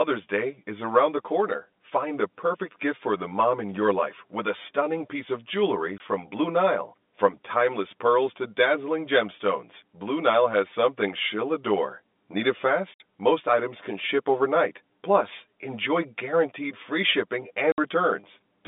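Right from the start there's channel delay (comb filtering): one side arrives around 10 ms late, and when the two are summed to mono, what they share cancels at regularly spaced notches starting near 50 Hz. The whole clip sounds hollow and phasey over the narrow telephone band.

Then there's packet loss filled with silence. Just after "stunning piece of jewelry", 5.98 to 6.00 s drops out, which fits one 20 ms packet. At 12.94 to 13.00 s there's a 60 ms hole, and again at 17.72 to 17.78 s right after "enjoy guaranteed free shipping", each fitting three lost packets. Each gap has hard edges.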